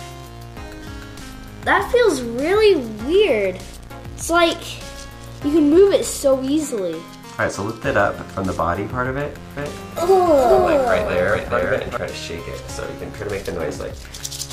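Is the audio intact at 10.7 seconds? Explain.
No. From 9.57 to 11.97 s a doubled audio track is present, likely from a second, slower capture path or an edit holding two offset copies. A full-band copy trails by around 400 ms at roughly 5 dB lower, dry and uncoloured, starting and stopping abruptly.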